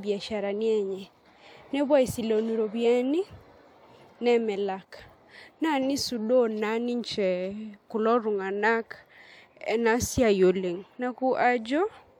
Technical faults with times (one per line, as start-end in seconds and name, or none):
none